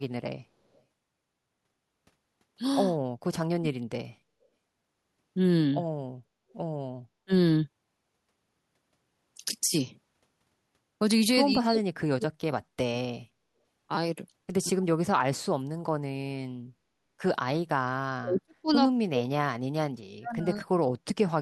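At 0.74 s and again at 6.5 s, a loudspeaker-side echo canceller likely failed to remove all of its pickup, so an echo leak sends a faint copy of the speech back about 200 ms late. Each leak lasts only a few hundredths of a second and sits roughly 40 dB below the speech, so it is a brief, ghostly trace rather than a distinct repeat.

From 3.44 to 3.83 s, the speech is suppressed in double talk. With both sides talking, the canceller likely could not separate the near talker from the returning echo, so it pulled both down, by as much as about 40 dB, for roughly 0.4 s. The same likely cause produces the other dips: a short drop of about 35 dB at 7.25 to 7.31 s, about a second of suppression between 11.56 and 12.83 s, about 2 s between 14.7 and 16.74 s, and a long stretch from 18.07 s to the end. In each one the speech sinks sharply and can break into pieces.

At 13.95 s, new audio missed its deadline and the device replayed its last buffer four extra times, which fits a 5 ms buffer. 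This repeated buffer loses about 20 ms of audio. Because each looped piece is so short, the hard joins are heard as a click or a tiny buzz rather than an audible stutter.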